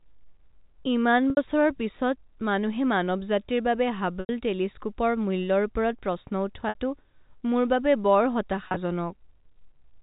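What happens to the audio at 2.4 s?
Nothing goes wrong at 2.4 s: the speech carries on intact through that moment, heard through the narrow, telephone-band sound of G.711 coding.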